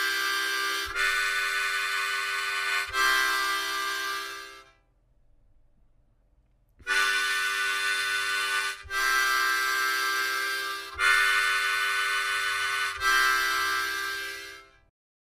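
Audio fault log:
No faults found on listening; nothing to log.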